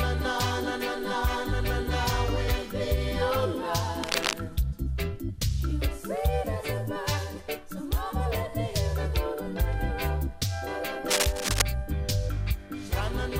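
A worn cable or connector was likely shifted during recording, its contact resistance jumping erratically and producing cable scratch noise: dense, uneven scratching bursts roughly as loud as the audio itself, from 4.03 to 4.33 s and again from 11.10 to 11.62 s.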